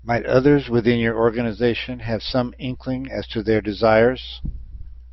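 No technical faults can be heard anywhere in this speech recording. Nothing in it calls for a time stamp or an explanation.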